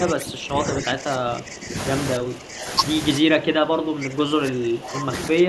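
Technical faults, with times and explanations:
0.00–1.75 s, 2.16–2.71 s, 3.18–5.13 s and 5.29–5.49 s, speech suppressed in double talk: the speech sinks by around 15 dB in the first three stretches and around 10 dB in the last, turning thin or broken in pieces. This is likely an echo canceller that, with both sides talking at once, confused this talker with loudspeaker echo and ducked them. Unlike a noise gate or network dropout, the speech dips or breaks up only while both sides talk at once.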